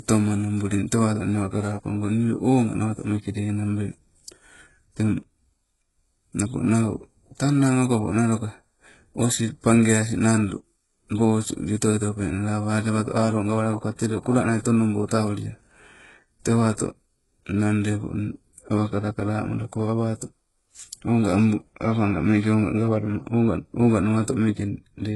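All the way through, the speech carries heavy HE-AAC compression damage, likely from a very low bitrate around 12 kbps. The rebuilt treble stops near 11.5 kHz, leaving s sounds gritty and metallic.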